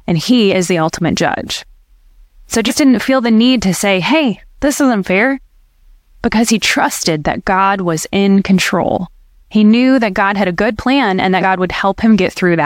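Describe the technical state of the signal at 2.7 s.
Compressed frames skipped at 2.67–2.72 s, just before "didn't feel the need": roughly three frames of about 46 ms go unplayed, jumping ahead around 150 ms.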